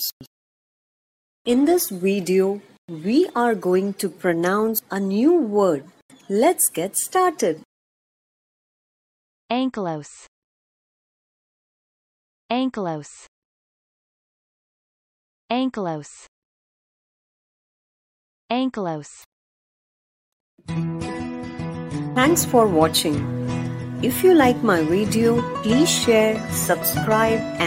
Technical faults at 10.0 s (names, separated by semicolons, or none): none